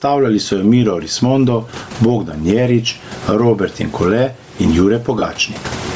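From the start the speech sounds squashed and breathing, with the gain swinging by about 20 dB. This gain pumping likely comes from input gain set far too high, with a fast limiter clamping down on each loud syllable.

Throughout, the speech also carries a breathy, grainy edge, with upper-frequency detail replaced by a hiss-like fill below the band's top at 8 kHz. That is likely Bluetooth LC3 compression starving the high band, and the plainly audible damage fits a bitrate near 32 kbps with 7.5 ms frames.

From 5.19 to 5.22 s, about 30 ms of the sound turns into a short noisy smear. These are lost LE Audio frames, which fits a loss of about four 7.5 ms frames. The decoder filled the gap by repeating the last spectrum with randomised signs.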